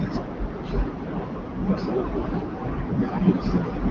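No technical faults can be heard anywhere in this recording.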